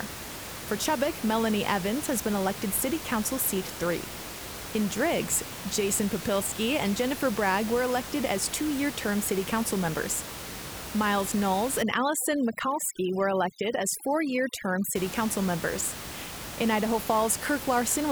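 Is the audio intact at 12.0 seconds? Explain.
No. Overdone noise removal affects 11.83 to 14.95 s, unlike room noise that sits about 11 dB below the speech. Bands near the noise estimate are cut hard, leaving near-silent gaps with twinkling specks.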